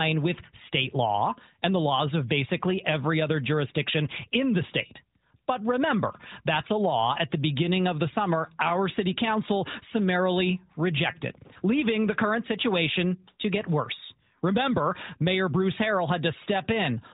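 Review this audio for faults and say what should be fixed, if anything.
Nothing needs fixing: the speech is carried over an AMR narrowband mobile codec link at 12.2 kbps, with only light coding damage and no content above 3.8 kHz, which is what that path delivers by design.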